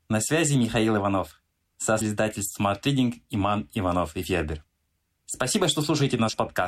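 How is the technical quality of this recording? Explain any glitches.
The recording has one glitch, a short burst of damaged data in the compressed stream. From 1.97 to 2.02 s, about 40 ms, part of the encoded speech arrives corrupted. The decoder cannot interpret those frames correctly and loses its place, then hunts for the next valid frame header before normal decoding resumes. During that gap it produces a brief squawk or blip instead of the speech.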